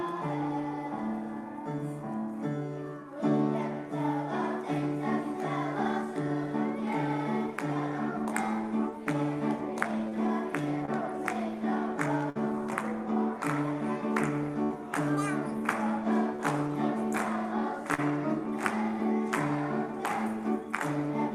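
The audio has short concealed packet loss at 10.09, 10.85, 16.36 and 17.94 s. Each time, 20 to 40 ms never arrived and the receiver filled the gap by continuing the preceding sound. This is heard as a brief smear or wobble. On a spectrogram it appears as a thin slice of frozen, repeated harmonics or flat noise. A burst of packet loss at 12.30 and 14.63 s removes about 60 ms each time. The last sound is stretched into a held buzz or hiss that fades before the audio resumes further on. The waveform shows a tapering, repetitive stretch, and the spectrogram shows flat horizontal bands dimming into a gap.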